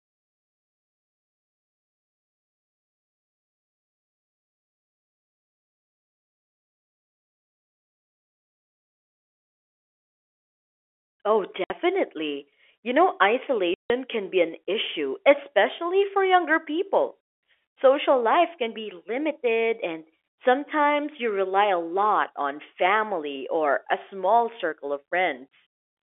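Packet loss filled with silence cuts the speech at 11.64 s for 60 ms, and again at 13.74 s for 160 ms just before "can be an issue". Stretches of the stream never arrived, and the receiver inserted dead silence rather than concealing the gap. Both holes are whole multiples of 20 ms, which fits 20 ms packets, and they have hard edges, set in the narrow telephone-band G.711 sound on either side.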